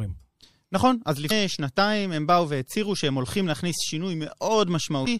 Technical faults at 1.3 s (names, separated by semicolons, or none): MP3 compression; damaged data in a compressed stream